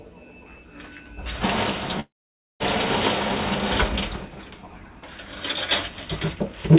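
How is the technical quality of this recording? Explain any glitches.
The recording has one clear glitch, a gap of a little over half a second early on. It arrived through a G.711 call path, so nothing is heard above 4 kHz.

From 2.0 s to 2.63 s there is a long network dropout, likely. About 0.6 s of audio never arrived. The receiver briefly stretched the last sound into a fading buzz. Then it gave up and left near-silence for roughly half a second. When the sound returns at 2.63 s, the missing part is simply gone.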